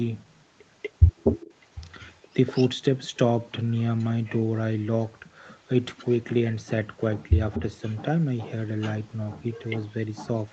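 Speech with an echo leak: a copy of the voice trails it by 241 ms at 0.82–2.69, 3.99–4.41, 5.49–6.11, 7.54–7.94, 8.81–8.91 and 9.53–10.5 s, strongest in the first stretch and barely there around 4 s, likely a far-end speakerphone whose echo canceller didn't fully catch its mic pickup.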